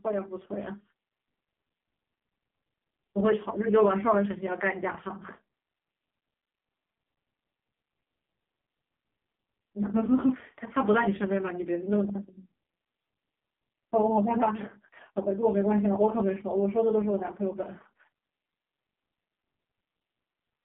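From start to finish the speech carries the sound of the AMR narrowband mobile codec, heard at its harshest. Everything above 3.5 kHz and below 150 Hz is gone, so a spectrogram shows a flat ceiling with nothing above it and a thin floor. The voice is buzzy and synthetic, rebuilt from a coarse vocal-tract model and sparse pulses, which points to the lowest AMR-NB mode of about 4.75 kbps.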